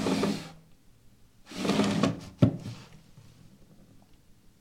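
No audible technical faults occur anywhere in this recording.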